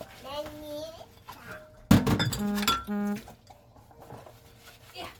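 Throughout, likely Bluetooth LC3 compression at roughly 48 kbps leaves plainly audible coding damage, a grainy, breathy edge, with nothing above 20.2 kHz.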